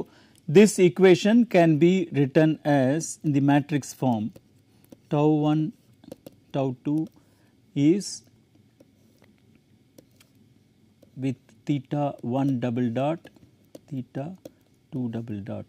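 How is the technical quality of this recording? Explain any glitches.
No technical glitches can be heard anywhere in this recording.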